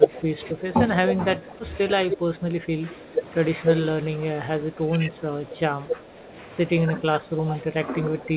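Throughout the clip, from 0 to 8.36 s, the speech dips by around 10 dB in places, likely speech suppressed in double talk, seen as sagging waveform envelopes and thinned energy below the 4 kHz call-band ceiling.

Echo leak appears at 0.16–0.45, 1.06–1.52, 2.10–2.17, 3.65–3.91, 5.52–5.96 and 7.50–7.62 s. These are delayed copies trailing the speech by about 0.27 s, ranging from faint to louder than the speech. On a spectrogram they show as repeated harmonic patterns. The likely cause is loudspeaker pickup that escaped cancellation.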